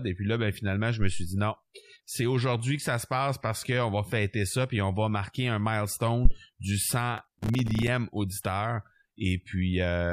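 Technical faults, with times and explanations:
1.02–1.35 s and 6.25–6.33 s, phantom power thump: a supply switching on or off on the live input sends a voltage step through the coupling capacitors. The first, after "là ben finalement je", decays over about 75 ms. The second, after "va marquer un milestone", dies within about 18 ms.
7.18–7.88 s, processor overload crackle: the processor repeatedly misses deadlines for buffers of around 3 ms, with something like thirty drops over the stretch. Each missed buffer leaves a hard-edged gap of silence, and the run of gaps forms a gritty crackle over the audio.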